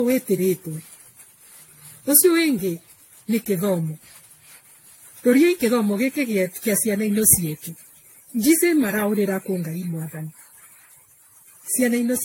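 From start to finish the speech sounds swirly and hollow, with a watery smear, consonant attacks blurred rather than crisp, and nothing above 16.5 kHz. This is generation loss, most likely from the audio being decoded and re-encoded around ten times, in a way that fits a 64 kbit/s AAC-LC chain. Each pass quantises on a shifted frame grid, so the noise and spectral holes stack up into more damage than that bitrate alone would leave.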